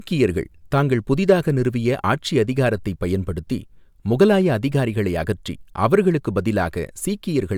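No technical faults can be heard anywhere in the speech.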